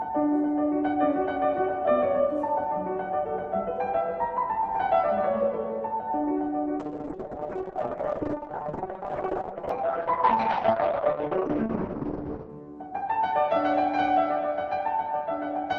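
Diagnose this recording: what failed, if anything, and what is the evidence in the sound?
Call bitrate drop at the codec: from 6.8 to 12.55 s bandwidth shrinks from 12 kHz to 6 kHz and turns coarse, consistent with Opus falling from 32 to 6 kbps.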